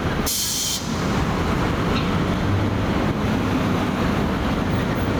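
Gain pumping runs through the whole clip, from start to finish. The gain swings by around 10 dB, pulled down as soon as a loud sound arrives, so the level seems to breathe in and out. The likely cause is an input gain set far too high, with a fast limiter or compressor dragging it down on each peak. Loud and quiet sounds end up squashed close together in level.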